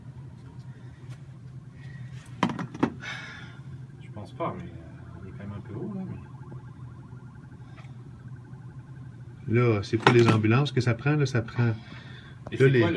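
No dropouts, glitches, level jumps or other audible faults anywhere in the clip.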